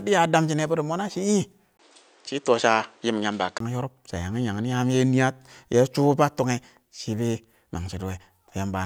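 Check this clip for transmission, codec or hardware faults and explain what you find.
One fault is present. From 1.77 to 3.60 s the speech turns dull, likely from an input switched to a poorer device whose narrower band stops at 9 kHz. A spectrogram shows a 20 ms gap, the top band vanishing, and a new noise floor about 40 dB down. The waveform steps by roughly 5 dB.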